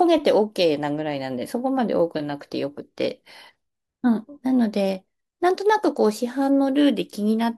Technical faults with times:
none

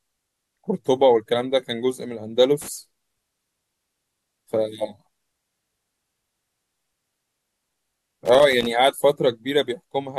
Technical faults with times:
2.62-2.68 loose connector crackle
8.25-8.66 loose connector crackle

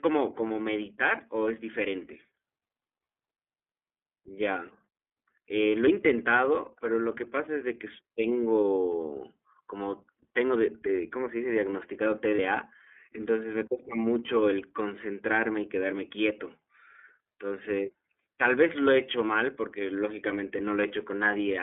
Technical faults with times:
0.00-21.62 iLBC codec
0.47-0.51 lost iLBC frames
12.35-12.40 lost iLBC frames

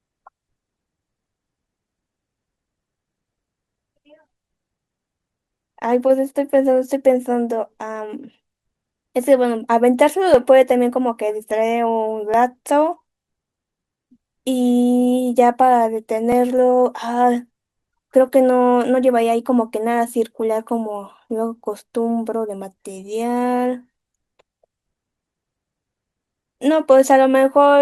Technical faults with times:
6.36 overlap between stream segments
10.34 overlap between stream segments
12.34 overlap between stream segments
16.32 overlap between stream segments

